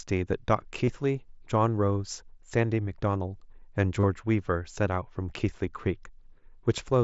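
At 0.86 s and again at 4.00 s, concealed Bluetooth headset packet loss bridges short runs of missing audio between headset and phone, about 30 ms each, consistent with a handful of consecutive lost packets. Rather than a silent dropout or a click, the receiver fills each gap by repeating the closest-matching recent stretch of waveform, so the hole comes out as a brief buzzy, tone-like hold at full level, with a slight warble as the real signal resumes.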